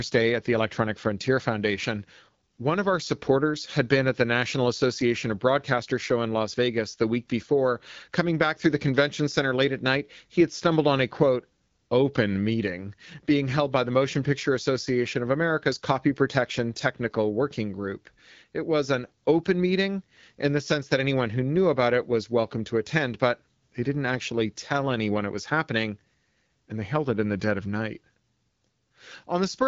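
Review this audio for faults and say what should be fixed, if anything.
Nothing here needs fixing: the speech comes through an AMR wideband (HD Voice) codec at 12.65 kbit/s, a rate at which this codec keeps speech clear, with only light coding wear.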